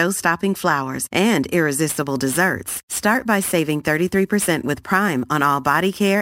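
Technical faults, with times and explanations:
1.89 s to the end, crude rate conversion: samples are simply repeated with no filtering, which fits a 32 to 44.1 kHz change, leaving a gritty, inharmonic fizz about 20 dB below the speech.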